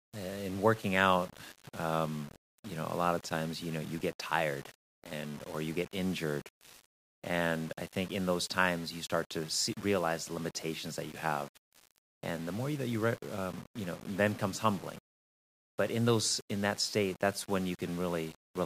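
Across the whole speech recording, grainy distortion tracks the signal, roughening quiet passages and making the softest sounds sputter or vanish. The likely cause is low bit depth without dither, consistent with rounding to 7 bits, leaving error only about 20 dB below the signal.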